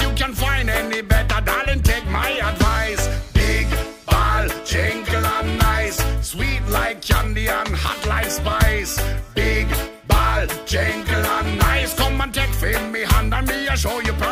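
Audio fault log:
No faults detected.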